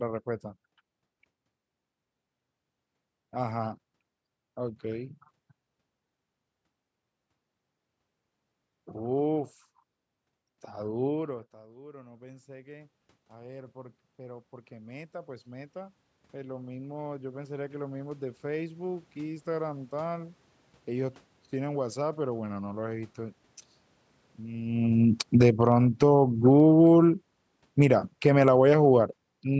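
Around 11 s the voice drops by about 24 dB as the talker moves away, and from 11.26 s to 19.94 s automatic gain rising follows. The control slowly adds about 19 dB, so voice and room noise swell together over several seconds.

After the talker comes closer again, near 24.5 s, automatic gain falling runs from 25.24 s to 29.15 s. The control sees the now-loud input and pulls its gain down by about 12 dB, so speech and background sink together gradually.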